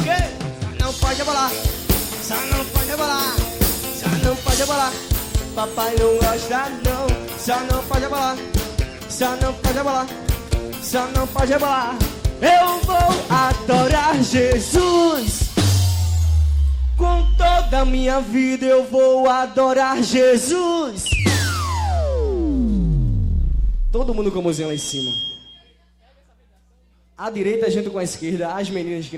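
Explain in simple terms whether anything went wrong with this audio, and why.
Nothing went wrong with this audio; there's no technical fault anywhere in it. Listening through, nothing breaks up, drops out or jumps at any point.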